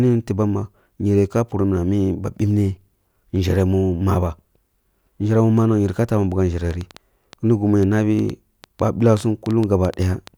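From 6.71 s to 10.28 s a train of clicks, about twenty uneven pops near 5 per second, ticks over the speech, likely interference, unlike one-off isolated clicks.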